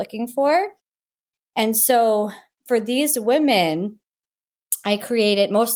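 No dropouts, glitches, level jumps or other transport or processing faults are audible anywhere in the recording.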